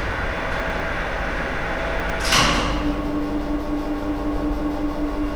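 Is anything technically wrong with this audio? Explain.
Yes, there are chunks out of order at 0.6 to 0.8 s and 2.0 to 2.2 s. A 100 ms chunk plays one slot late, so the sound briefly jumbles at the hard joins.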